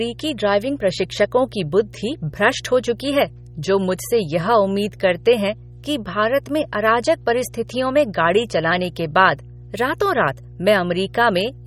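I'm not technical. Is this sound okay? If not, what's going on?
No. First, there is mains hum: the recording equipment picked up electricity from the power supply, likely through a ground loop or a nearby transformer. That adds a steady, low 60 Hz buzz, fairly loud and not far below the speech, running through the whole clip.

Second, the audio was likely saved with heavy MP3 compression, which discards detail to make the file small. Throughout the clip this makes the speech sound watery and swirly, with metallic chirps on s sounds and smeared consonants.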